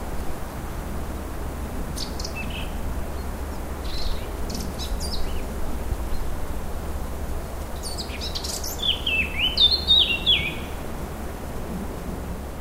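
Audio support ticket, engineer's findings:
Damaged data in a compressed stream at 7.76 s: brief blip where corrupted frame bytes made the decoder misread the frame, lose sync and hunt for the next header.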